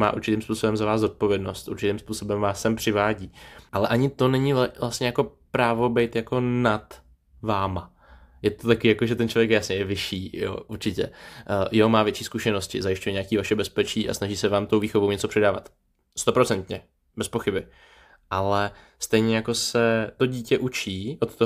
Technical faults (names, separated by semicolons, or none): none